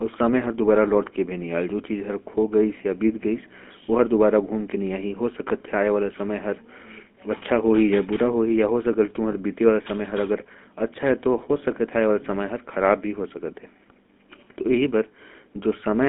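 Throughout, the GSM full-rate codec confines the speech to roughly 200 Hz–3.5 kHz and adds a buzzy, gravelly roughness from its pulse-driven excitation, which fits 13 kbps. That roughness sets it apart from the watery smearing of transform codecs. From 9.32 to 9.35 s, lost GSM frames leave a brief metallic ring, which fits a single 20 ms frame repeated rather than a clean gap of silence.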